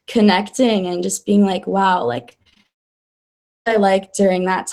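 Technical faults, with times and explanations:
2.29–2.67 s, repeated packet loss (robotic sound): six short gaps, longest 26 ms, patched by repeating prior sound, giving choppy speech; spectrogram shows smeared, repeated slices.
2.67–3.68 s, long network dropout: speech cuts out for about one second into near silence, likely from a network outage, then returns with that stretch missing; the waveform goes flat.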